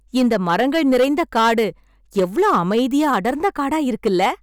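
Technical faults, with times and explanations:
Throughout, hard clipping: the speech was driven about 8 dB past what a stage could pass, flattening roughly 4% of samples into harsh crackle on loud syllables.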